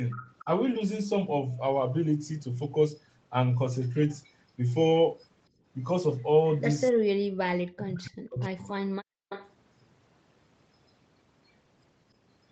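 A speech recording carried over a call shows three kinds of fault. From 0.1 to 0.45 s, and again from 9.29 to 9.51 s, a faint delayed copy of the voice trails behind, 281 ms late. It sits about 20 dB below the speech at first, then about 15 dB below. This is likely an echo leak: a loudspeaker's sound reached a microphone and slipped past the echo canceller. From 5.5 to 5.64 s the background dips by about 17 dB and then returns. That is background gated by the echo canceller, which clamped the microphone while the far end played. From 7.15 to 8.82 s, and briefly from 9.11 to 9.19 s, the voice drops away very deeply, by roughly 40 dB, for about one and a half seconds in total. The likely cause is speech suppressed in double talk, with both sides talking at once.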